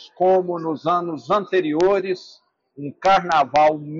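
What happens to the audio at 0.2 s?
Nothing goes wrong at 0.2 s; the audio there plays through intact, with no dropout, click, distortion or other fault.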